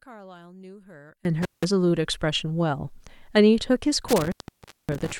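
One channel inverted, from 0.00 to 1.25 s: the speech drops by about 26 dB and turns faint. Its centred body is almost gone, leaving a faint residue. The likely cause is one stereo channel with reversed polarity, so the content shared by both sides cancels when they are combined, and only their small differences remain.

Intermittent contact, from 1.42 to 1.65 s and again from 4.08 to 5.12 s: the signal breaks off abruptly with crackle at each edge. A loose connection opens briefly, for 175 ms in the first event and 569 ms in the second. While the line is open, the speech disappears and only faint hiss carries through.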